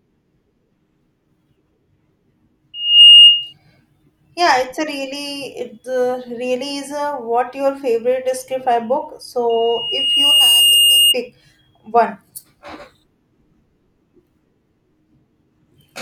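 Loudspeaker feedback squeals at 2.8 kHz from 2.74 to 3.53 s and 9.49 to 11.15 s: loop gain exceeds one, so a tone swells quickly, then slowly, well above the speech.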